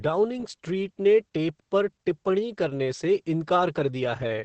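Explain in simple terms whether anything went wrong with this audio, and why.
Yes. Throughout this speech clip you can hear Opus voice compression. The codec squeezed the voice hard to save data. Nothing above about 8.5 kHz survives, so it sounds muffled. The voice also comes out hoarse and slightly robotic.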